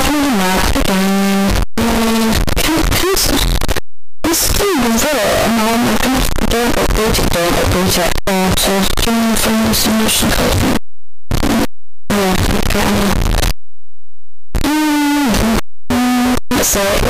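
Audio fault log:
throughout, signed and unsigned mixed up: very loud, harsh distortion across the clip, with quiet passages as loud as the rest. The 8-bit samples are likely read with the wrong sign convention, flipping the top bit so each zero crossing jumps across the full range.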